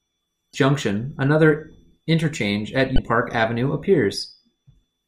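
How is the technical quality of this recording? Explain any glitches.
Two glitches come from damaged data in the compressed stream of this speech recording. At 0.51–0.54 s, and again at 2.95–2.98 s just after "another interchange at", corrupted bytes in the encoded frames made the decoder misread or reject them, lose sync and hunt for the next valid frame header. Each 30 ms event is heard as a brief disruption in the speech.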